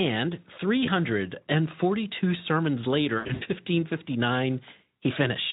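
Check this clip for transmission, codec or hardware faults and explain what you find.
The speech, carried over a Speex link with light coding roughness, shows VoIP packet loss concealed by the speech codec twice. At 0.85 to 0.91 s, a gap consistent with one lost 20 ms frame is bridged by the decoder repeating its last pitch and filter, giving a brief buzzy or noisy smear. After "sermons later", from 3.17 to 3.43 s, losses scattered over about 240 ms, totalling about 180 ms with the longest run 80 ms, produce a fading buzzy tone or coloured noise. The voice stays weakened afterwards while the decoder's frame-to-frame state recovers.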